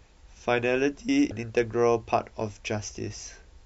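A brief glitch cuts through the speech from 1.28 to 1.32 s: damaged data in the compressed stream, which the decoder misreads before regaining frame sync.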